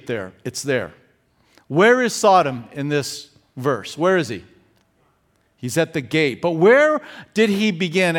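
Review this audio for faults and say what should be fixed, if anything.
Nothing stood out on listening to this speech recording, so there is nothing here that needs fixing.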